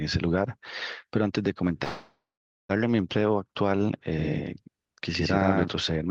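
At 1.83 s the speech stops and the last sound is held as a fading buzz or hiss. This is a call audio freeze. It lasts until 2.71 s. The fill decays and the final stretch, roughly half a second, is silent. The likely cause is packets held up in transit, so the jitter buffer ran empty. When they arrive, the speech picks up exactly where it stopped. Nothing is lost. Everything after is about 0.86 s later.

From 4.18 s to 5.68 s a doubled audio track appears. A second, full-band copy of the speech trails the first by about a tenth of a second. It is roughly as loud as the original. It has no reverb tail or room colour. It cuts in and out abruptly at both ends. This is likely a second capture through a slower path, or two copies left out of step in an edit. Underneath both faults, the Opus call coding can be heard, with the top end stopping near 12 kHz.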